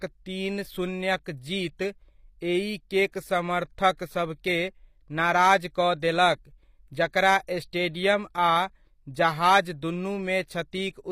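Throughout the speech, codec damage is plainly audible, likely from HE-AAC compression. Nothing remains above 15.5 kHz. The rebuilt treble's harmonics don't line up with the lower band.

Pre-echo occurs at 3.12 s and from 3.97 to 3.99 s. Block noise leaks before each attack, spreading 15 and 20 ms. A brief hiss precedes the onset.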